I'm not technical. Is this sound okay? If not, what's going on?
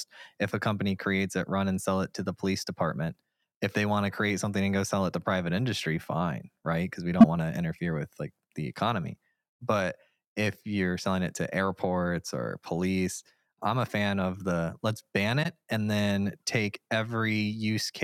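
No. At 7.2 to 7.25 s there is a corrupt frame decoded: a couple of blocks of the compressed audio were damaged, and the player used them anyway. The wrong data comes out as a short, sharp squeak or blip that does not belong in the speech. At 15.43 to 15.46 s there is a corrupt frame concealed: one damaged block was caught by the player, which covered it over instead of playing it.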